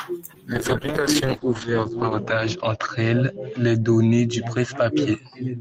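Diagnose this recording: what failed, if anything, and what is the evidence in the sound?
A call bitrate drop hits the codec stage, driven by the network's bandwidth estimate. From 0.54 s to the end, the speech loses its air and turns coarse and watery. The encoder was pushed from 32 kbps down to 8 kbps. It sat at that floor for 1.64 s. At that rate it coded more crudely and narrowed the audio band from 20 kHz to 8 kHz. That removed the upper treble and muffled the speech. The bitrate never recovers within the clip.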